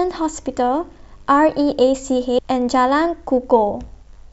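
At 2.38 s the decoder skipped compressed frames: a run of frames, either absent from the stream or rejected as corrupt, was never played. Roughly 400 ms of speech is missing, which fits about ten frames of 32 ms each. The speech jumps straight ahead at that point, and the speech resumes as though some of it had been cut out.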